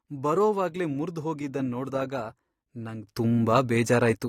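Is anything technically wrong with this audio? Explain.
Yes. At 3.07 s the speech shows a sudden gain jump, rising by about 12 dB and staying there until the end. The background noise rises by the same amount at the same instant, which is the giveaway: a talker simply speaking louder would lift the voice but not the noise floor. The step is instantaneous, not a gradual swell like automatic gain control. The likely cause is a gain setting applied without a ramp.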